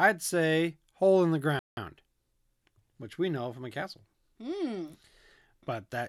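A Bluetooth stall hits at 1.59 s, right after "say hole in the": the speech drops to silence for 180 ms and resumes at 1.77 s. This is likely radio interference delaying packets until the headphone buffer emptied and playback paused for the resends.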